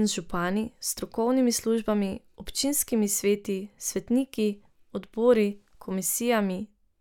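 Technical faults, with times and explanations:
No technical faults are heard in this speech clip.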